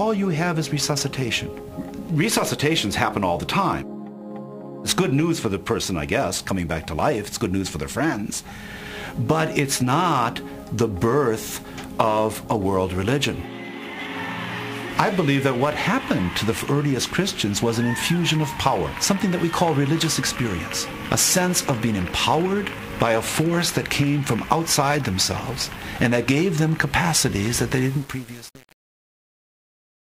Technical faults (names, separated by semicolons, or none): truncation distortion on a fade